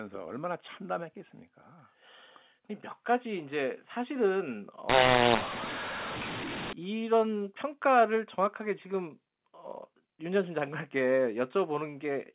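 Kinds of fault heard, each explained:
mu-law and A-law mixed up: from 4.89 to 6.73 s, telephone speech coded with mu-law is decoded as A-law, so each sample goes through the wrong logarithmic curve. Levels scramble, the speech turns harsh and distorted, and pauses fill with noise as the quietest samples rise well above silence. A waveform shows a jagged envelope and gaps without a flat baseline. A spectrogram shows broadband smearing up to the 4 kHz telephone ceiling.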